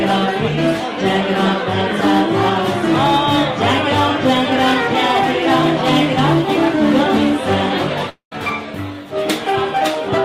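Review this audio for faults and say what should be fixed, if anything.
At 8.09 s the sound breaks up and resumes at 8.33 s, a long network dropout. The last sound smears into a fading buzz, then about 0.11 s of near silence follows. When the audio returns, roughly 0.22 s of material is gone. This is likely a stall in packet delivery, with the receiver concealing the gap until it gave up. A larger jitter buffer and redundancy or forward error correction on the link should prevent it.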